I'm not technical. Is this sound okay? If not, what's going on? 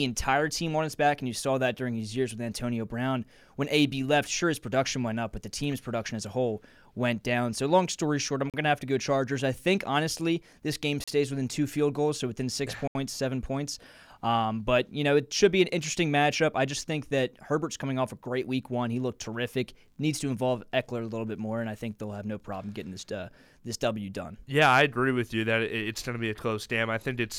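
No. There are three brief dropouts, each likely a Bluetooth stall: at 8.50 s and 11.04 s (each under 0.04 s) and at 12.88 s (about 0.08 s). Each time the speech cuts to silence and picks up again as the wireless connection briefly falls behind.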